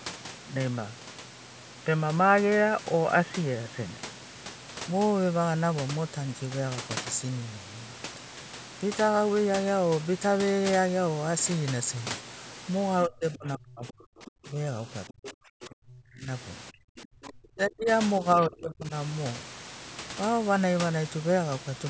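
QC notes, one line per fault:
0.00 to 4.38 s, input switched to a poorer device: The opening sounds dull and boxy, with a background noise about 40 dB below the speech. At 4.38 s the sound opens up to the full call band reaching 8 kHz, with no gap and no jump in level. The most likely cause is a change of input device, from a narrowband headset or call-profile microphone to a wider one.
13.05 to 14.59 s, 15.09 to 16.27 s, 16.71 to 17.89 s and 18.20 to 18.92 s, speech suppressed in double talk: In each span the talker's speech dips and thins, and in places it nearly vanishes. The deepest cuts are about 35, 40, 35 and 30 dB. These spans overlap the moments when the far side's voice is present, so the likely cause is an echo canceller that could not separate the near talker from loudspeaker echo and pushed down both.
13.88 to 13.92 s, 14.25 to 14.31 s, 15.08 to 15.31 s and 16.97 to 17.29 s, other side's voice leaking through: Faint scraps of a second voice break through. 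They sit about 25 dB under the talker, except the 15.08 s burst, which is stronger at about 15 dB below. This is likely residual loudspeaker echo that the echo canceller failed to remove. The scraps fall inside or beside the suppressed spans.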